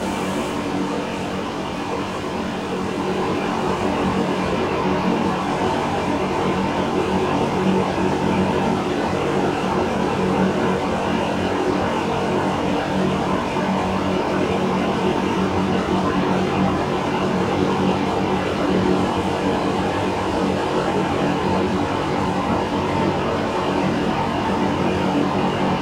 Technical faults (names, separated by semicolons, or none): channel delay (comb filtering)